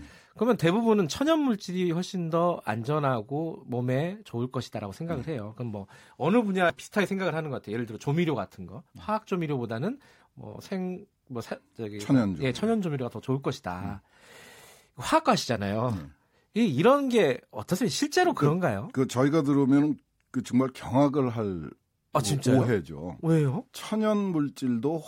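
At 6.7 s the speech is broken by a single instance of damaged data in a compressed stream. Corrupted bytes at that point leave the decoder unable to read the frame properly, so it loses sync and hunts for the next valid header. The result is a brief chirp, squawk, click or short hole in place of the speech. On a spectrogram this shows as a narrow vertical break. The waveform shows a short glitch or discontinuity there.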